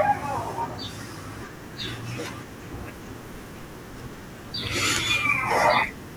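No technical faults can be heard anywhere in this speech recording. Nothing in the signal chain calls for comment at any point.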